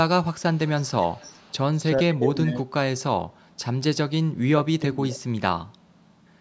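From 0.53 to 1.58 s a faint, delayed copy of the speech trails the talker by about 0.4 s, sitting roughly 25 dB under it. This echo leak likely comes from a far-end loudspeaker whose echo canceller let residue through. Unlike room reverb, it is a distinct repeat, not a smear.

At 1.94 to 2.68 s, and again at 4.48 to 5.22 s, the talker's level sinks by up to about 25 dB and then about 20 dB, in pieces lasting most of each span. This is speech suppressed in double talk, likely an echo canceller ducking both voices while the sides overlapped. Unlike network dropouts, the loss follows the overlap of the two sides.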